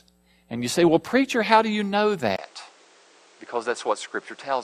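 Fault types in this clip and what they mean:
Input switched to a poorer device: after a 20 ms gap, the sound loses everything above 9.8 kHz, drops about 5 dB and gains a new noise floor, likely from a different input device.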